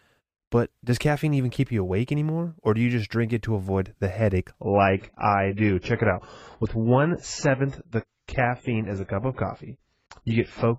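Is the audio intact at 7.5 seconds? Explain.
No. From 4.61 s, just after "to avoid the headache", to the end, an adaptive stream at a lower bitrate takes over. The sudden, gapless drop points to a fall from about 96 to 16 kbit/s AAC. Nothing sounds above 7.6 kHz, and codec artefacts rise.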